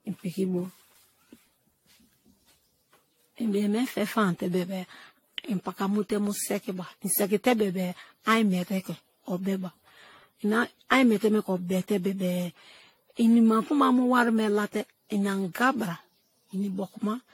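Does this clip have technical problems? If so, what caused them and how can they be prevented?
Yes. Throughout, the speech sounds swirly, smeared and hollow, with blurred consonant attacks and nothing above 16.6 kHz. This is likely generation loss, with noise and spectral holes building up over about seven lossy re-encodes, which fits repeated AAC-LC passes at around 64 kbit/s. To prevent it, keep a lossless master for editing and encode to a lossy format only once, at the final step.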